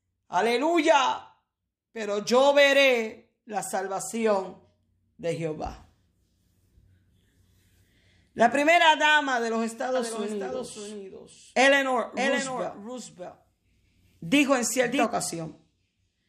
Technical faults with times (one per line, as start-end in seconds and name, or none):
9.95-15.05 doubled audio track